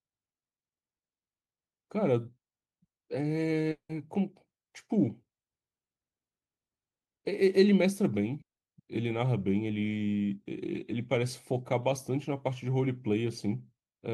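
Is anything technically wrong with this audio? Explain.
Yes. At 3.71–3.91 s and 8.41–8.59 s the speech breaks off into a fading buzz, then near-silence, before resuming with material skipped. This is a long network dropout, likely: packets stopped arriving, the receiver extended the last sound, and the roughly 180 ms and 160 ms gaps were lost.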